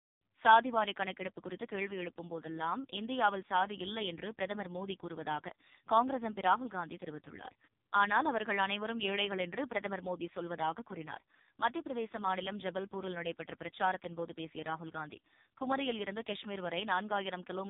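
Throughout, AMR narrowband mobile codec coding rebuilds the speech from a pulse-driven vocal-tract model, leaving it buzzy and synthetic, which fits the 4.75 kbps mode. The spectrogram is blank above 3.8 kHz.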